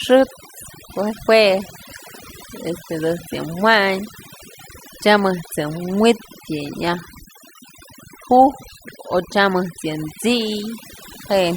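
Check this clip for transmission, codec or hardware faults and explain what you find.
Throughout this speech recording there is one fault: overdone noise removal, present from start to finish. A noise reduction stage was set far too aggressively, so any frequency band sitting close to its noise estimate gets pulled right down or cut out, and the softer parts of the voice get cut along with it. Between phrases the background falls to near silence scattered with twinkling specks. Codec artefacts are tied to bitrate rather than signal level. This damage instead tracks loudness, hitting quiet passages hardest.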